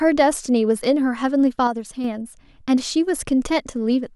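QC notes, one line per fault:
1.67–2.04 s, sudden gain jump: the level drops abruptly by about 5 dB, then returns. Speech and background noise fall together, likely from an unramped digital gain change.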